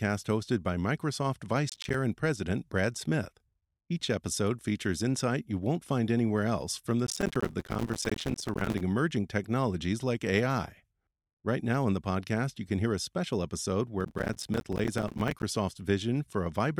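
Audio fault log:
1.70–1.95 s, 7.07–8.81 s and 14.00–15.43 s: processor overload crackle. Roughly 30, 150 and 70 repeated missed buffer deadlines each cut in a hard-edged gap of silence a few milliseconds long, heard as gritty tearing over the speech. The waveform shows rapid dropouts to silence, and the spectrogram shows dense vertical broadband streaks.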